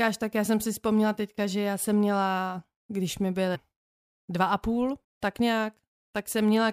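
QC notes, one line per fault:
3.54 s and 5.03 s, compressed frames skipped: after "jsem měla když mi" and "dva a půl" the speech jumps ahead by roughly a fifth of a second, which fits whole frames of about 26.1 ms going missing.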